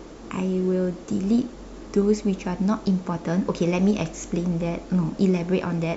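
No technical faults are audible.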